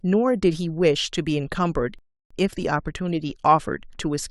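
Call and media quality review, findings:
Speech drops to silence 1.99–2.31 s, then resumes exactly where it stopped, nothing lost. Rebuffering stall: player buffer ran dry, adding about 0.32 s.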